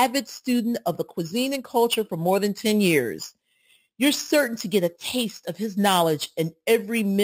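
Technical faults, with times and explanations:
Throughout: imaging from sample-and-hold upsampling. Above about 6 kHz there is a bright, metallic fizz that rises and falls with the speech. Each sample was held without a smoothing filter, which fits a 12 kHz source raised to 44.1 kHz. Mirror copies of the speech spectrum form around multiples of 12 kHz. The lowest copy spans 6 kHz to 12 kHz at about 16 dB below the signal, and it moves opposite to pitch changes.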